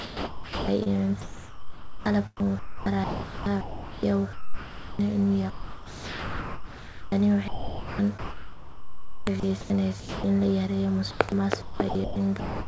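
Speech carried over a call path with nothing above 8 kHz, which fits G.722, is chopped from 0.00 to 4.99 s, 5.50 to 10.24 s and 11.11 to 12.67 s. In those stretches about 3.3 s, 3.6 s and 0.75 s of sound are swapped for comfort noise, likely sound chopped by the voice detector. Packet loss would leave silence or smeared repeats, but here the gaps are filled with a steady synthetic hiss.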